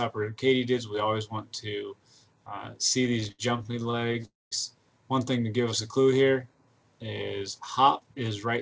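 The audio carries no content above 8 kHz, which fits a wideband call codec such as G.722. From 3.20 to 4.25 s there are repeated stalls, a stutter. The sound halts 16 times, the longest gap 70 ms, and the receiver fills 270 ms with continued sound, about a quarter of that span. At 4.25 s a call audio freeze follows, lasting until 4.53 s. For 262 ms the last sound is carried on and then fades, with about 200 ms of silence. The sound then resumes where it stopped. The likely cause is delayed packets emptying the jitter buffer. From 7.81 to 8.48 s there is a jitter buffer speed-up. Short pitch-period pieces are cut to reduce stored delay, around 70 ms in total. The audio runs at 108% speed with the pitch unchanged, so it sounds hurried.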